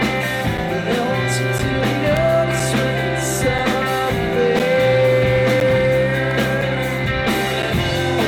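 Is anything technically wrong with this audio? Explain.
Yes. Brief hard-edged dropouts of about 5 to 11 ms occur at 0.58, 1.59, 2.6, 3.59, 4.6, 5.61, 6.62 and 7.63 s. This is a gap between stream segments: timestamps of consecutive 1-second segments don't quite meet, so silence fills each join.

Sharp snaps sit on top of the sound at 2.17 and 6.31 s, likely an electrical switching spike from nearby equipment coupling into the audio line.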